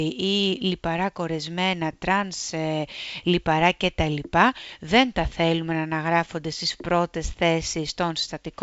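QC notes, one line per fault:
No faults found; the speech carries G.722 wideband telephone coding, its band ending near 7.7 kHz with light upper-band hiss, at the full 64 kbit/s mode.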